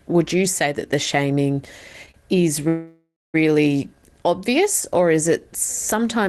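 At 2.11 s a packet of this speech failed to arrive on time, so the jitter buffer emptied and the receiver covered the wait by stretching the last sound for about 29 ms, through 2.16 s. This short stall from a late packet removes nothing; the audio resumes exactly where it paused. What you hear is a syllable held a fraction too long, with a faint buzzy texture or a small dip in level before normal flow returns.

From 2.68 s to 3.36 s there is a call audio freeze of about 658 ms. This was likely caused by packets being held up in transit, draining the jitter buffer. The receiver first extends the last sound as a buzzing or hissing, fading tail, which then gives way to roughly 240 ms of silence. The speech then picks up from the point where it stopped, so an extra gap has been inserted and nothing is lost. The band is limited to about 12 kHz, as the Opus coding on this call path leaves it.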